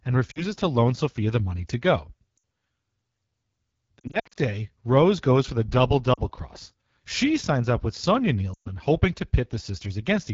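Speech carried over the AMR wideband (HD Voice) codec at a low rate, with a rough, raspy texture that fits the 8.85 kbit/s mode. On a spectrogram, detail stops near 6.4 kHz, and above it sits a smooth band of shaped noise up to 7 kHz. Lost AMR speech frames cause dropouts that sink to near silence at 0.31–0.44 s, 2.37 s, 6.13–6.20 s and 8.54–8.69 s, plus a scattered cluster from 4.00 to 4.38 s. In each, the decoder repeats stale pitch and tract settings with fading gain. The waveform shows short sagging envelopes, and the spectrogram shows frozen, blurred harmonics before the speech recovers.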